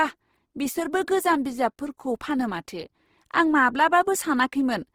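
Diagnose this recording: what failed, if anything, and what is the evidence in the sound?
Codec stage: speech is grainy and rough throughout, likely from Opus compression in CELT mode, consistent with a 16 kbps rate. The spectrogram shows noise-filled bands reaching 20.4 kHz.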